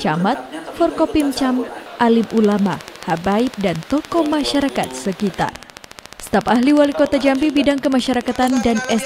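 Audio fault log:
2.24–9.00 s, train of clicks: a regular ticking at 13.9 clicks per second, around a hundred alike pulses peaking roughly 10 dB above the sound, likely from interference or a faulty connection or power supply. The waveform shows evenly spaced spikes, and the spectrogram shows thin full-height vertical lines.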